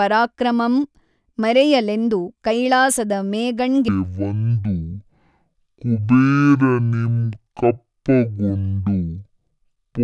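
Wrong sample rate from 3.88 s to the end of this speech clip: the audio runs at half speed and drops a full octave (12 semitones), so the voice turns low and dragging. Samples are played back unconverted at about half their original rate, which fits 44.1 kHz material played at 22 kHz.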